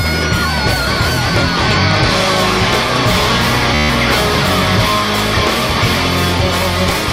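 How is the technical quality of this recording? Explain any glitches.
There is one glitch, a Bluetooth stutter from 3.75 to 3.89 s. For about 147 ms the receiver ran short of data and kept replaying its last short slice, giving a rapid buzzing repeat. Unlike a silent dropout, the gap is filled, and the sound then resumes further on, as if time kept running.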